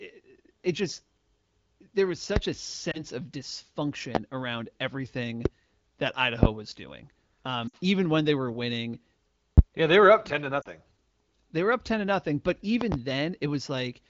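A sharp loud pop sits well above the speech at 2.36 s, just after "there was". This is likely a voltage spike from a plug, a switch or static. At 2.91 s there's a lost AMR speech frame: the decoder patches the 20 ms gap with the previous settings, so you get a quick dip or warble. More single pops land at 4.15, 5.45 and 6.43 s. At 7.68 s three lost frames, about 60 ms, drop the speech to near silence briefly. Another pop lands at 9.58 s, between "when they were winning" and "yeah they were up". Then 40 ms of frames drop out at 10.61 s after "were up ten to", and a double pop closes things at 12.81 s.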